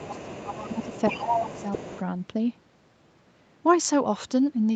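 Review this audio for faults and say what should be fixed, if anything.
Speech suppressed in double talk: from 0.0 to 0.92 s and again from 1.09 to 1.93 s the talker's level sinks, by about 15 dB at worst in the first stretch and about 10 dB in the second. The likely cause is the echo canceller turning everything down because it could not separate the talker from the loudspeaker echo while both sides spoke. On a waveform the envelope caves in across those spans, and a spectrogram shows the harmonics thinning and breaking up. Better double-talk detection in the echo canceller, so it attenuates less when both ends are active, would prevent this.

Other side's voice leaking through: from 0.03 to 2.02 s a second voice runs underneath the talker at about 10 dB below it, likely loudspeaker playback that the echo canceller left in the microphone signal. A spectrogram shows a fainter, separate set of harmonic lines crossing the talker's. 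The waveform shows low-level activity filling what should be gaps. A headset, lower loudspeaker volume or a better-converged echo canceller would keep the far end out of the microphone.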